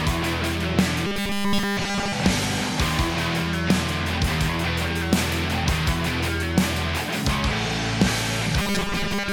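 From 1.07 to 2.13 s, and again from 8.62 s to the end, the sound turns into a rigid, metallic buzz pitched at 200 Hz: robotic sound from repeated short buffers. It likely comes from audio arriving too slowly, so a 5 ms chunk is replayed in place of most of the real signal. The buzz stays locked at one pitch while the underlying sound still shows through roughly, which sets it apart from comb-filter colouring or a pitch shift.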